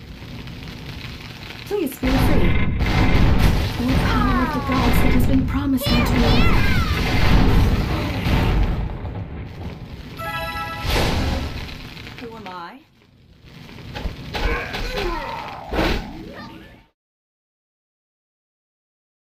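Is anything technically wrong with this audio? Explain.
No, nothing is technically wrong with this audio: the signal holds steady, and the one level change is a deliberate, smooth fade-out that begins at roughly 15.5 s and reaches silence at 16.96 s with no click or hard edge.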